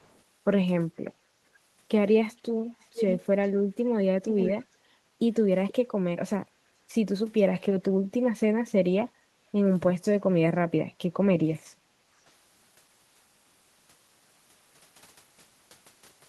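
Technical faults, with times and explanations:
0.0–0.2 s and 2.38–5.74 s, echo leak: a delayed copy of the speech trails the original by about 0.46 s in the first instance and 0.47 s in the second. At the start it is very faint, well down in the background. From 2.38 s it is nearly as loud as the direct voice and clearly audible as a doubled, lagging repeat. This is likely an echo canceller on a loudspeaker endpoint that failed to fully remove its microphone pickup and sent the residue back.
1.0–1.63 s, 4.84–5.08 s, 7.9–9.31 s and 11.79–12.19 s, background gated by the echo canceller: the room tone dips briefly and then recovers. The drops are about 14 dB, 11 dB, 15 dB and 11 dB, and each lasts a few tenths of a second within its range. The canceller pulls the microphone gain down hard while far-end audio plays, then releases it, so the ambience audibly pumps out and back in.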